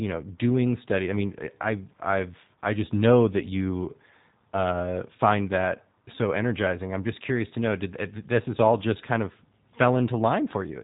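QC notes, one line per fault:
Throughout, G.729 codec. The speech is plainly rough and slightly synthetic, as if rebuilt from a model rather than recorded. Nothing comes through above 3.8 kHz. The coarse pulse coding of each short frame fits an 8 kbit/s G.729A link.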